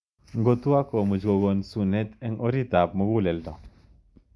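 No technical faults can be heard anywhere in the recording.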